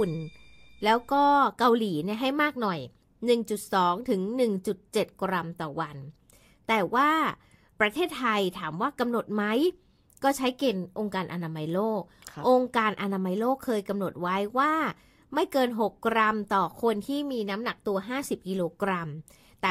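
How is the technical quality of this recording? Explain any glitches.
No technical faults or glitches can be heard anywhere in this speech recording.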